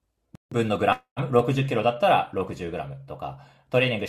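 At 0.35 s the speech drops to silence for about 162 ms, resuming at 0.52 s. This is likely a Bluetooth stall: radio interference delayed packets, the headphones' buffer emptied, and playback halted until retransmitted packets arrived.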